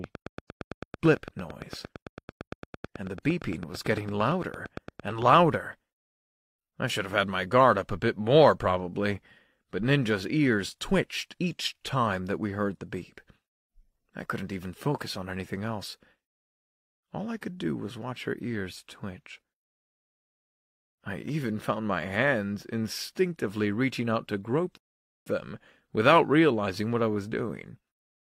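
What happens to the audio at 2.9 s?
At 2.9 s you're right in the middle of a train of clicks that runs from about 0.04 s to 5.34 s. It's a steady ticking, roughly 8.9 clicks a second, evenly spaced, about fifty in all, each one poking up around 10 dB above the speech and carrying on through the pauses. Pulses that regular and that similar in shape are likely interference from nearby equipment or a faulty connection or power supply.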